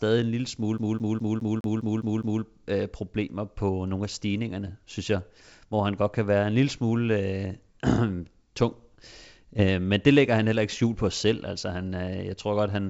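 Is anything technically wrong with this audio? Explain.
Yes, two faults are audible in this speech, which runs over a G.722 wideband telephone link at 64 kbit/s.

From 0.78 to 2.43 s, a CD stuck on one turn replays a 206 ms slice eight times with a brief mute at each jump. The waveform shows identical repeating blocks separated by tiny gaps.

From 9.59 to 9.69 s, bit errors on the ADPCM link (a low rate, around one bit in a thousand) upset the decoder's step size and prediction. The result is rough pops with brief level jumps, visible as short broadband vertical streaks.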